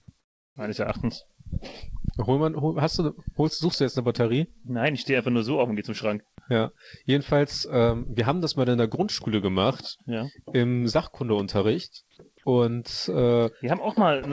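From 0.20 to 0.56 s the background turns into a steady, featureless hiss about 14 dB quieter than before, with its detail gone. This is comfort noise in place of the background, likely generated by the receiver while the sender paused transmission during a quiet stretch.

At 4.61 to 4.67 s a brief smear or wobble interrupts the sound. This is short concealed packet loss: about 30 ms of audio arrived too late, so the decoder extended the preceding sound to fill the gap before blending back.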